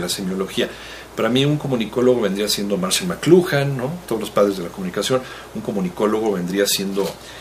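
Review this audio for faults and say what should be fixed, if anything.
A bit error spike sits at 3.28 s: a single sample jumps to about -11 dBFS and immediately falls back, so the ear catches one dry, sharp tick with no relation to the surrounding sound. A flipped bit in memory or on a digital link shifts that sample's value by a power of two, and a one-sample step like this carries energy across the whole spectrum rather than at any pitch. To prevent it, use error-checked transfers and ECC memory along the digital path, and repair this sample by interpolating from its neighbours.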